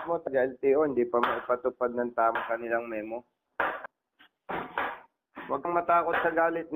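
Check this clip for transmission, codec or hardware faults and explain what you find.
The clip has four instances of compressed frames being skipped. At 0.27, 2.35, 3.86 and 5.65 s the sound jumps forward. The gaps are roughly 70, 200, 150 and 100 ms. Whole compressed frames were missing or rejected by the decoder, so playback resumes several frames later. The jumps match a frame length of 32 ms.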